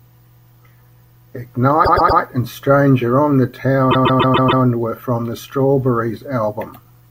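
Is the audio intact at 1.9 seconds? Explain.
No. The speech hits repeated frames from 1.84 to 2.20 s. A 120 ms run of compressed audio reached the decoder more than once. It played the same slice three extra times. The result is a stutter, with the same fraction of a second heard back to back. The repeats add 360 ms to the clip.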